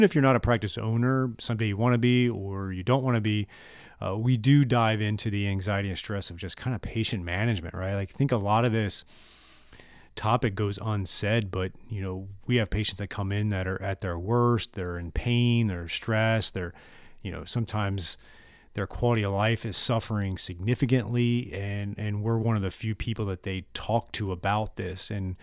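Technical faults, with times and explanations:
No technical faults can be heard in this speech clip.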